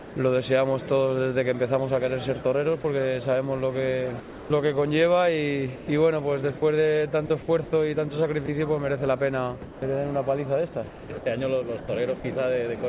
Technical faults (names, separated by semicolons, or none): sound dropped by the voice detector; sound chopped by the voice detector